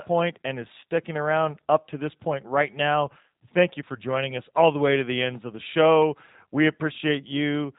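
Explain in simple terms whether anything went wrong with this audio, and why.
Throughout the speech, the G.729 codec is plainly audible. It rebuilds speech from a simple model of the throat and pitch, so the result sounds slightly rough and synthetic. Everything above about 3.8 kHz is gone, which makes it dull, like a phone call.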